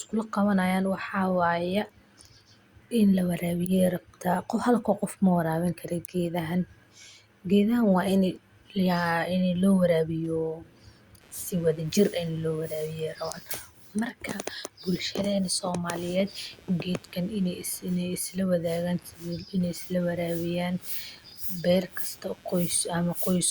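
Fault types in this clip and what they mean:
Computer activity noise: from 9.94 s to the end of the speech, a buzzy, chirping layer rides under the signal, pulsing at around 150 Hz and sitting roughly 30 dB below the speech. It comes from processor, graphics or mouse load shifting the ground the audio circuit shares with the computer. What separates it from mains hum is that it follows the computer's activity, not a steady 50 or 60 Hz tone, and it does not track the speech itself.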